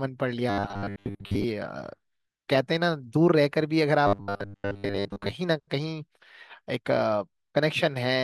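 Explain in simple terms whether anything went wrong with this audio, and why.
Two stretches of this speech, from 0.50 to 1.44 s and again from 4.07 to 5.33 s, turn into a stiff metallic buzz. This is robotic sound from repeated short buffers. The likely cause is that fresh audio arrived too slowly, so the playback kept looping a tiny slice about 10 ms long, skipping most of the real sound. That loop forces a steady 100 Hz drone, unlike a plain dropout, which would go silent instead.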